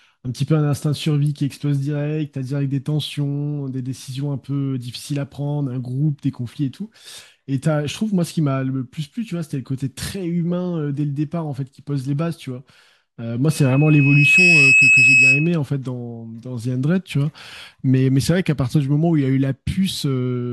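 From 13.50 to 15.59 s, a loudspeaker feedback squeal cuts through the speech. A microphone is picking up its own loudspeaker, and the loop gain tops one at 2.6 kHz. The tone swells over about a second, ending roughly 10 dB above the speech.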